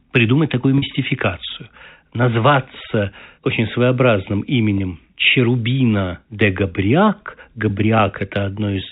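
Packet loss with pitch repetition at 0.78 s, after "придумать такую", and 4.78 s, after "назваться очень своеобразным": 40 ms and 20 ms gaps bridged by repeating the last pitch period, heard as brief buzzy holds over the telephone-band sound.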